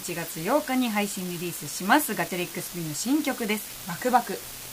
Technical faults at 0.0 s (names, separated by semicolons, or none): unreliable data bit